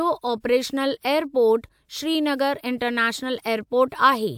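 A speech recording with no audible technical faults.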